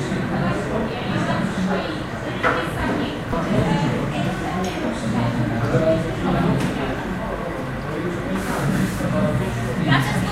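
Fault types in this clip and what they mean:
No technical faults are audible anywhere in this recording of sounds.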